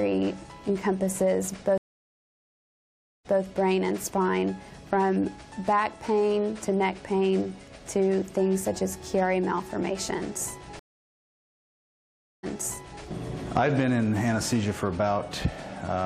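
Twice the stream connection dropped and the player had to reconnect and restart its decoder mid-stream, a stream reconnect each time. At 1.78 s the sound cuts to about 1.47 s of silence, then resumes at 3.41 s from a point 0.16 s earlier, repeating a short stretch. At 10.79 s a longer gap of about 1.64 s follows, and when the sound returns at 13.03 s it has jumped back 0.6 s, replaying that material after a brief muted or faded start.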